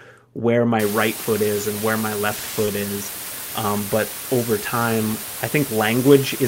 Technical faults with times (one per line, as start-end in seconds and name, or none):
0.79-6.48 low bit depth with dither
2.65-2.69 short concealed packet loss